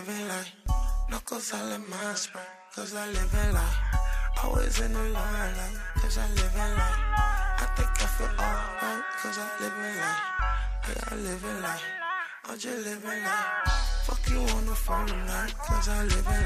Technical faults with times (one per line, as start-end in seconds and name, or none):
1.84-2.87 Bluetooth SBC bit pool drop
7.72-11.47 Bluetooth SBC bit pool drop
16.02-16.45 Bluetooth SBC bit pool drop